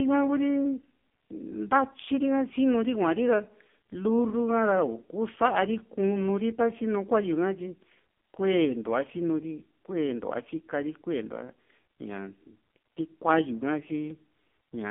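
AMR narrowband mobile codec damage runs throughout: the speech is confined to roughly 200 Hz–3.5 kHz and rebuilt from sparse pulses, sounding heavily buzzy and synthetic, which fits a low mode near 5.9 kbps.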